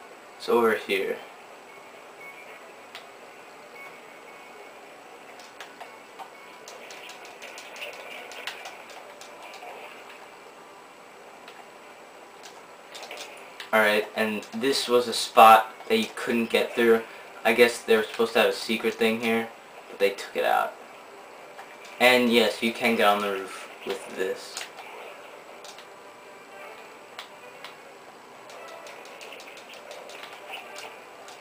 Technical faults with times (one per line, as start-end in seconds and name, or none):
none